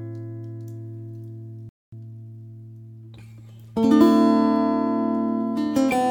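At 1.69 s the sound cuts to silence for about 0.23 s before resuming at 1.92 s, a playback stall, likely from the player running out of data or being blocked. From 1.92 s to 2.38 s the audio hurries at normal pitch, running about 1.5 times fast: time-compressed catch-up, with small pieces cut out and cross-faded to clear the backlog.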